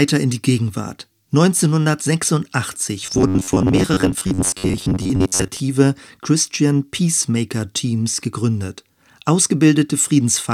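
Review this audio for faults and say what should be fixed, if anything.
Robotic sound from repeated short buffers runs from 3.06 to 5.61 s. The speech turns into a rigid metallic buzz at 93.8 Hz, likely because audio arrived too seldom and a 10.7 ms block was replayed for roughly half the time. A spectrogram shows evenly spaced horizontal stripes at multiples of 93.8 Hz, and the waveform shows identical cycles repeating. A larger or adaptive jitter buffer with proper loss concealment would prevent it.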